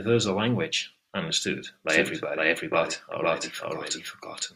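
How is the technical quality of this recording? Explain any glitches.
The quality is compromised by a doubled audio track from 1.90 s to the end: a full-band copy trails the speech by about half a second, at roughly equal level, likely from a second, slower capture path. It starts abruptly. Spectrograms show every feature repeated, shifted right.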